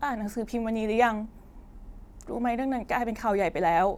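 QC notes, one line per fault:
No faults detected in this clip.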